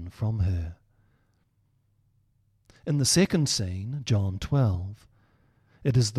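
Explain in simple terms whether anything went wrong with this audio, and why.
Nothing went wrong with this speech recording. Listening through it, there is no technical problem to point to at any moment.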